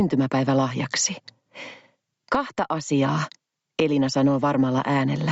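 Throughout the clip the level pumps, with a gain swing of around 20 dB. Loud and quiet passages sit unnaturally close together, giving a squashed, pumping character. This is gain pumping, likely from the input gain being set far too high for the microphone, so a fast limiter or compressor keeps clamping down on every peak and releasing in between. Nothing is heard above 8 kHz, as expected from the call path.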